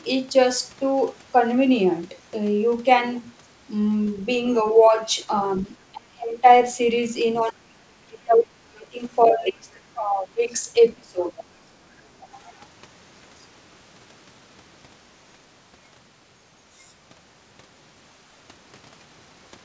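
Around 4.17 to 4.22 s there's a brief scrap of the other side's voice leaking through, very faint, roughly 35 dB under the talker. It's likely loudspeaker echo that the canceller didn't fully remove from the mic. It comes back at 11.37 to 11.44 s, and this time it's much more noticeable at about 20 dB down. It's short.

The bigger issue is speech suppressed in double talk. The talker gets ducked hard at 5.9 to 6.45 s, 7.41 to 9.0 s, 9.27 to 10.53 s and 10.95 to 11.33 s, with dips of around 30 to 35 dB. The middle two stretches are the worst, with a second or more of the voice pulled down. Then there's a small 10 dB dip at 12.21 to 12.27 s. The likely cause is the echo canceller mistaking overlapping talk for echo and clamping everything, so the voice sinks or drops out in pieces. The call path tops out at 8 kHz, consistent with G.722 at 64 kbps.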